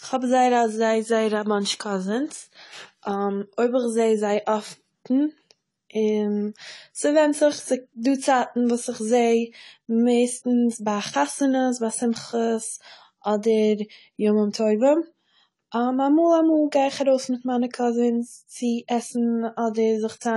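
Throughout the speech, heavy transform coding has removed detail: nothing is left above about 11.4 kHz, and the damage is plainly audible as a dull, smeared tone with a fizzy edge on sibilants, likely AAC compression at a low bitrate around 32 kbps.

From 10.69 to 10.71 s, just before "ביי חתונות ביי", pre-echo occurs. The coder spread its noise across the block holding a sharp onset, so about 20 ms of hiss arrives ahead of the attack, which sounds softened.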